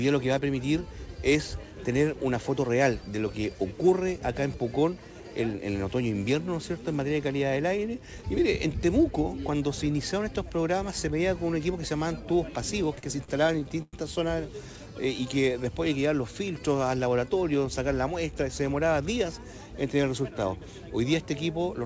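Around 12.96 s you hit a burst of repeated stalls (stutter) that runs to about 13.94 s. Packets were turning up late, so the jitter buffer kept draining and the receiver had to stretch the last bit of sound to cover each gap. There are nine of these, adding up to roughly 251 ms of filler, with the longest at about 104 ms. Nothing actually drops out. Instead that stretch drags and hiccups, with about a quarter of it being concealment, all through a G.722 call path that tops out at 8 kHz.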